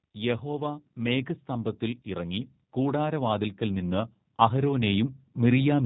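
From the start the speech carries G.729 codec damage, and it's plainly audible. Everything is rebuilt from a vocal-tract model, a pitch predictor and a handful of pulses, so there's nothing above 4 kHz, and the voice comes across rough and a bit synthetic, which fits a low-rate 8 kbit/s voice link.

On top of that, automatic gain rising runs from 0.16 s to 5.81 s. The gain control judged the input too quiet and kept nudging it up, by about 11 dB in all, so voice and background swell together steadily across nearly the whole clip. The call's microphone processing, trimming the lowest bass, is just doing its normal job.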